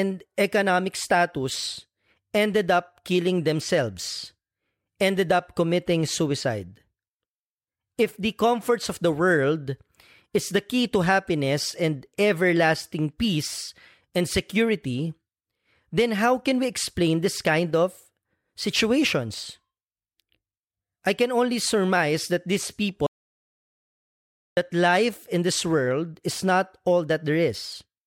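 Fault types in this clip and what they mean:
Audio dropout to silence: the input signal was likely lost for a moment, through a disconnected device, a failed link or an accidental mute, while the recorder kept writing silence. In this speech clip the sound cuts off abruptly after "only surmise that these" at about 23.07 s and returns mid-flow with "life in this world" at about 24.57 s. The gap of roughly 1.5 s is complete silence with no room tone, and whatever was said during it is gone.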